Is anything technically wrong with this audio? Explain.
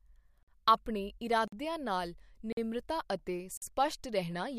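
Yes, there's a gap between chunks, four times: 0.43–0.48, 1.48–1.52, 2.52–2.57 and 3.57–3.62 s. The speech arrives in 1-second pieces with roughly 48 ms of silence inserted at each join, so nothing's missing, but you hear short holes at a steady rhythm.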